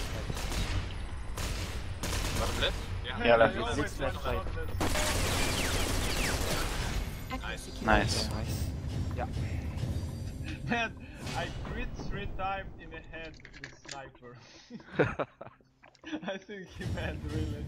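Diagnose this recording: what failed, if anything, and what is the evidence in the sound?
Nothing failed; no faults heard.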